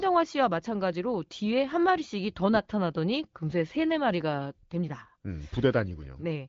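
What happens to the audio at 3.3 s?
Nothing goes wrong at 3.3 s; the speech carries on intact through that moment, with only the upper limit near 7.4 kHz that the AMR wideband (HD Voice) path places on it.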